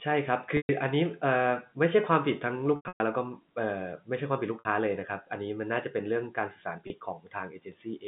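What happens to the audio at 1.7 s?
At 1.7 s the speech carries on intact, with nothing beyond the narrow band of the G.711 telephone coding it passes through.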